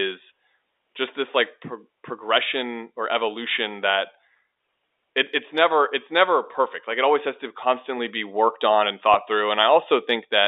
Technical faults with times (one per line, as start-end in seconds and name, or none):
9.14 packet loss with pitch repetition